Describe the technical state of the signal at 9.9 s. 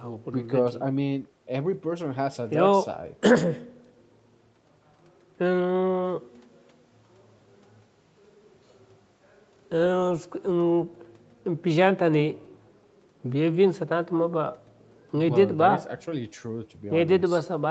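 At 9.9 s the speech is intact, with no dropout, glitch or distortion, only the steady 8 kHz band limit and usual coding noise of the call's microphone processing and Opus codec.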